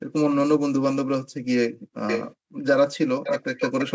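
From 0.0 to 0.1 s, 1.31 to 1.43 s and 1.71 to 1.96 s, the background is gated by the echo canceller. While the far-end loudspeaker plays, the room tone is pushed down by about 40 dB and then returns. The speech itself is not smeared or warbled, which separates this from packet-loss concealment.

From 2.07 to 2.35 s a delayed copy of the speech arrives 468 ms late, a little below the original. This is echo leak, likely from a loudspeaker whose echo canceller let part of the playback through. It is a distinct repeat, not a room's diffuse reverberation tail.

The background is gated again from 2.37 to 2.54 s.

From 3.24 to 3.91 s the same 468 ms echo comes back at about the same level as the speech. At that level it can pass for a second talker overlapping the first.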